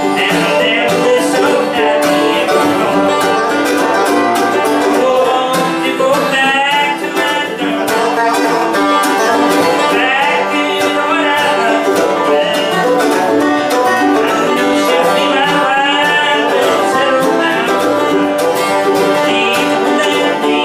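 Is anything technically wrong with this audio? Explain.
No, no technical faults present.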